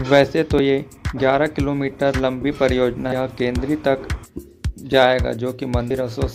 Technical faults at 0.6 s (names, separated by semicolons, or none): damaged data in a compressed stream